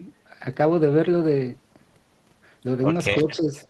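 From 3.23 to 3.54 s, the speech sinks by about 10 dB for roughly 300 ms, then recovers. This is speech suppressed in double talk. The likely cause is an echo canceller that heard both ends active at once, could not separate the near talker from the loudspeaker echo, and attenuated everything to be safe. On the waveform the envelope visibly narrows over that stretch, and on the spectrogram the energy fades before returning.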